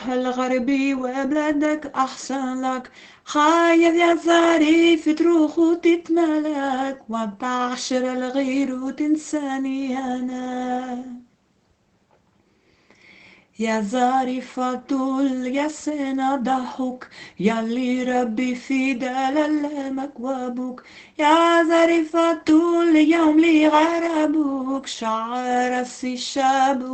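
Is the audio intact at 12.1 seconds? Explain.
Yes, the audio is intact at 12.1 seconds, with no dropout, glitch or other fault at that point.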